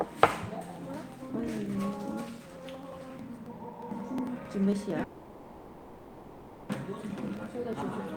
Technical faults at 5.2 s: periodic USB or driver dropouts; call audio freeze

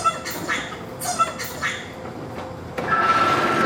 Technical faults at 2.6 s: audio read two samples at a time (double speed)

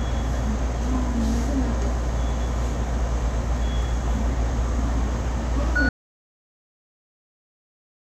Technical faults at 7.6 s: audio dropout to silence

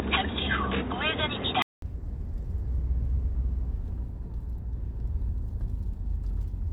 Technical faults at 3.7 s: none

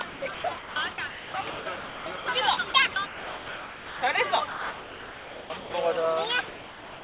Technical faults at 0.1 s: sound chopped by the voice detector

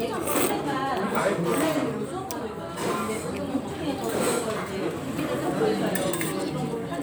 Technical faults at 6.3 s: none

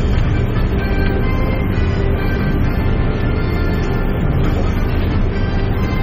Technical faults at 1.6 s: MP3 compression

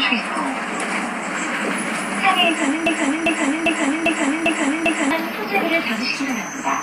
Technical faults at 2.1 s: Vorbis compression

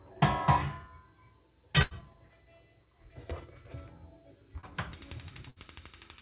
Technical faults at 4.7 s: clock slip clicks; short concealed packet loss

